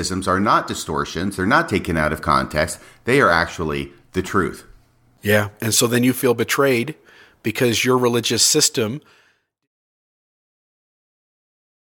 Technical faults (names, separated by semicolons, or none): none